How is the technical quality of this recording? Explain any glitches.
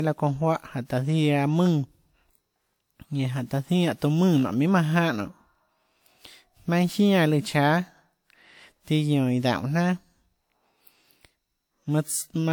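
Quality is compromised by one continuous fault.

Generation loss, throughout: the likely cause is about three lossy passes, each re-quantising on a shifted frame grid so noise piles up. The speech sounds swirly, smeared and hollow with blurred attacks, more than WMA at 96 kbit/s alone would explain, though content extends to 20.1 kHz.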